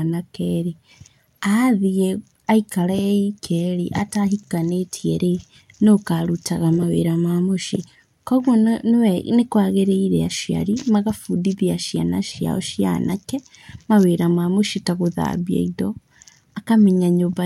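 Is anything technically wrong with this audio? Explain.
No, nothing in this speech recording stands out as a technical fault; the signal holds steady and intact throughout.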